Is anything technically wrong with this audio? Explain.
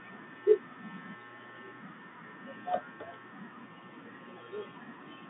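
No, nothing stood out on listening to this speech, which carries the narrow band of an ordinary G.711 telephone line.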